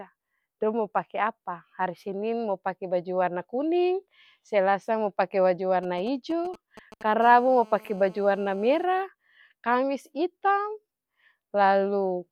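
From 5.83 to 7.03 s, a nearby 2G handset sends short signalling transmissions that the audio circuitry rectifies, producing GSM signalling bursts: a galloping dit-dit-dit of brief buzzes at the 217 Hz burst rate, roughly 20 dB below the speech.

From 7.22 to 8.84 s, the handset is in a call and transmitting continuously at 217 bursts per second, and the rectified pulses become GSM phone buzz: a steady, hard, raspy 217 Hz tone with dense harmonics, about 26 dB below the speech.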